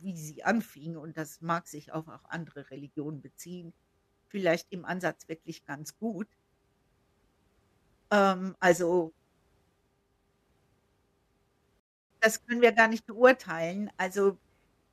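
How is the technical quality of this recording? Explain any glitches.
One glitch stands out: a rebuffering stall from 11.80 to 12.11 s. The player exhausted its downloaded audio and halted until more data arrived, so the speech cuts to silence for about 0.31 s, then resumes exactly where it stopped, with nothing missing but time added.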